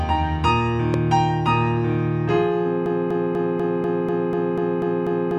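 At 0.94 to 0.96 s a single sharp loud pop jumps out, around 10 dB above the sound, which carries on beneath it; likely a brief voltage spike from a switch, plug or static. From 2.86 s to the end, a 0.25 s fragment repeats exactly, back to back, about ten times. This broken-record loop points to a player or stream that likely stalled and kept resending its last buffer, losing the audio that should have followed.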